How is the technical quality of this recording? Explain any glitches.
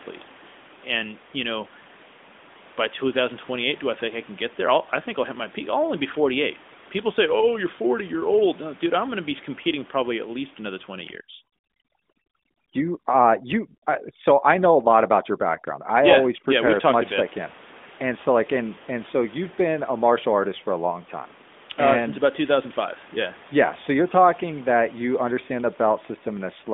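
The recording has one clear fault, a stretch of overdone noise removal, heard over narrowband phone-line audio with steady room noise about 23 dB below the speech.

From 11.12 s to 16.80 s, noise reduction set too strong clamps down hard. Each frequency band that falls close to the noise estimate is pulled far down or cut, taking the quieter parts of the speech with it. The room background drops to near silence dotted with twinkling specks.

The band, roughly 200 Hz to 3.6 kHz, points to an AMR narrowband mobile codec at around 12.2 kbps, with only light codec damage.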